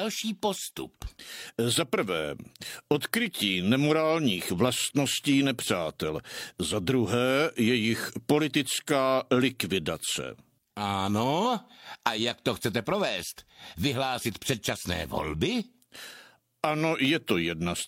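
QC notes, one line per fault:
No faults found on the speech track; nothing to log.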